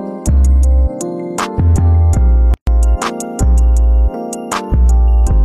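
At 2.54 s the sound drops out until 2.67 s, a hole of about 133 ms. This is a gap at a join of encoded pieces: two separately encoded segments were butted together without trimming, so the tail padding of one frame and the start-up delay of the next both stayed in. The edges are smeared by the codec, so the truly silent part is shorter, and the sound resumes exactly where it stopped.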